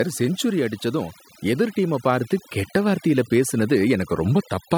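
Overdone noise removal runs through the whole speech clip. A noise reduction stage was pushed too hard. It cuts frequency bands that sit near its noise estimate, taking quiet parts of the voice too. The background drops and breaks up into twinkling specks.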